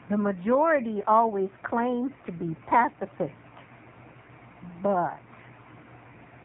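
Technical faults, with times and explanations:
throughout: AMR narrowband mobile codec. Speech is cut off above 3.8 kHz and sounds heavily buzzy and synthetic, which fits a low 5.9 kbps AMR-NB mode.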